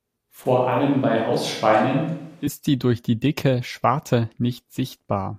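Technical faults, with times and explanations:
0.46 to 2.47 s, switch to a distant microphone: the speech abruptly turns roomy and hollow, with thinner bass and faint background noise about 35 dB down, at roughly the same level, then snaps back just before "sie durch die dicke". Likely the close mic dropped out and a farther one filled in.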